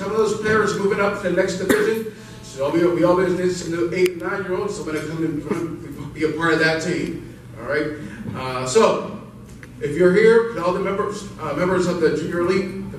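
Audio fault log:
2.18–3.39 s GSM phone buzz: steady, raspy 217 Hz buzz about 28 dB below the signal, from rectified call bursts; harsher and higher-pitched than mains hum.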